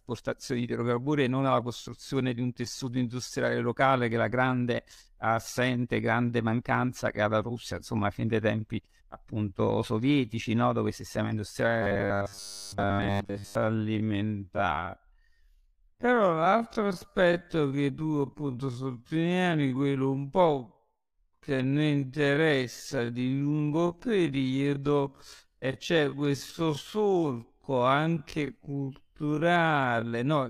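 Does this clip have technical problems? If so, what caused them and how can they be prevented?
Yes. From 11.67 s to 30.13 s, the speech plays at 0.524 times its original pace with unchanged pitch, sounding dragged: a time-stretched section, likely from software repeating short pieces to lengthen it. Prevent it by avoiding length-fitting stretches, or by using a higher-quality stretching algorithm.

From 11.82 s to 13.55 s, the speech becomes a rigid metallic buzz at 100 Hz, which fits a 10 ms block being looped: robotic sound from repeated short buffers, likely caused by audio arriving too seldom and most of it being replaced by repeats. Prevent it with steadier delivery and a larger input buffer.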